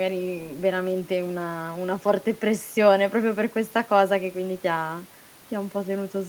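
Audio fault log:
The speech signal shows no technical faults, with only the room's own background noise sitting about 29 dB below the voice.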